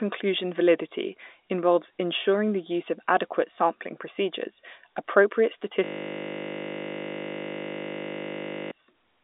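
Speech over a telephone line with nothing above roughly 3.8 kHz, and at 5.84 s a system hang loop takes over until 8.71 s: a 20 ms buffer repeats, giving a steady 50 Hz buzz.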